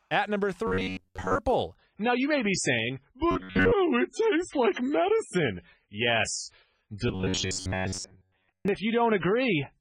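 From 0.67 to 1.40 s the speech turns into robotic sound from repeated short buffers: a rigid, metallic buzz at 93.8 Hz, likely caused by a buffer of about 10.7 ms being replayed over much of the audio. Unlike codec damage, it imposes one fixed pitch. From 1.76 s to the end, an adaptive stream at a lower bitrate takes over, with codec artefacts rising after a switch from roughly 128 to 16 kbit/s MP3, with no gap. The same buzz returns from 3.31 to 3.73 s and from 7.08 to 8.68 s.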